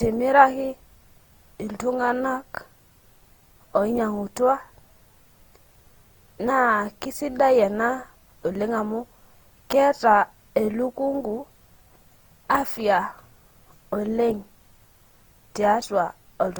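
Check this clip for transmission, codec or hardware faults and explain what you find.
One codec fault runs through the whole clip: generation loss. The speech sounds swirly, smeared and hollow, with blurred consonant attacks, worse than a single encode at a bitrate around 48 kbit/s would give, though content extends up to 20.2 kHz. The likely cause is repeated lossy coding, consistent with Opus, decoded and re-encoded roughly seven times. Each pass quantises on a shifted frame grid, so noise accumulates.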